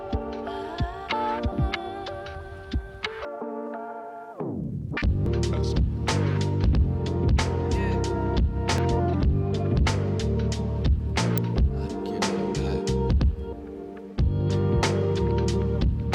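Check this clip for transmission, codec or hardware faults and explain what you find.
There is one fault type: damaged data in a compressed stream, occurring five times, at 1.52, 3.25, 5.26, 8.78 and 11.38 s. Each event lasts about 4 ms. At these points part of the encoded data was corrupted or lost, so the decoder could not read the affected frame correctly, lost sync and had to search for the next valid frame header. The result is a very short disruption in the sound at each time, heard as a chirp, squawk, click or brief gap.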